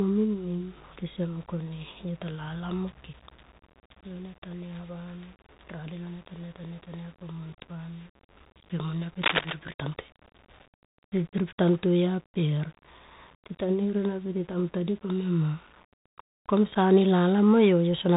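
Throughout, the speech passes through the Bluetooth CVSD headset codec, which encodes the waveform as one up-or-down bit per sample at 64 kHz with an adapting step size. Nothing above 4 kHz gets through, s sounds turn scratchy, and a granular hiss lies under the speech.

At 7.53 s, unconcealed Bluetooth headset packet loss drops about 7.5 ms of audio, which fits a couple of lost voice packets. Silence or an idle pattern fills the gap, leaving a tiny hole with abrupt edges. The same happens again at 16.75 s.

From 9.21 to 9.53 s there is cable scratch noise, likely from a worn cable or connector being moved so that its contact resistance fluctuates rapidly. A dense, uneven burst of scratching, only about 5 dB below the speech, rides over it for about a third of a second.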